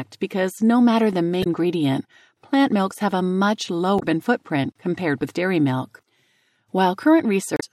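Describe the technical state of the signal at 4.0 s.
A brief glitch cuts through the speech from 3.96 to 4.03 s, just after "milks have a much" and before "footprint compared with dairy". This is damaged data in a compressed stream: bytes in that stretch of the file were corrupted, so the decoder misread the affected frames, lost its sync and scanned forward for the next valid frame header, producing the short glitch in place of the intended audio.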